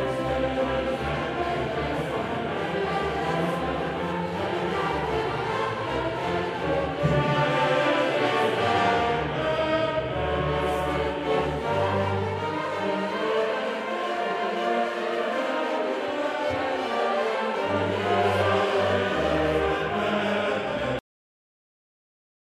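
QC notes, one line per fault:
20.99–22.54 s: cut-off end. At 20.99 s the audio halts mid-sound and falls straight to digital silence with no decay for the remaining 1.5 s. The closing buffers were never written or played, so the sound's natural tail is absent.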